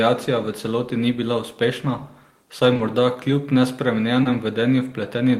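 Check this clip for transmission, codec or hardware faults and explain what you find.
Three short concealed packet losses occur in this speech clip. Two fall back to back at 2.73–2.77 s and 2.77–2.81 s, just before "morda kljub", and the third is at 4.23–4.27 s. Each time, about 20 ms of audio arrived too late for the decoder, and the receiver bridged the gap by extending the preceding sound. The result is a brief smeared or wobbling patch that may swallow a quick consonant before the real signal resumes.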